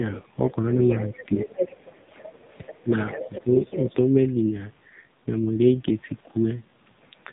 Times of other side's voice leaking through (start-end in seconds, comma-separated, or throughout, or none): 0.07-0.21